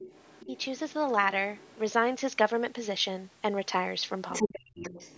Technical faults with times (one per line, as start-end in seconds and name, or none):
0.00-0.93 other side's voice leaking through
0.46-0.54 speech suppressed in double talk
1.55-1.78 other side's voice leaking through
4.32-5.17 other side's voice leaking through
4.43-4.96 speech suppressed in double talk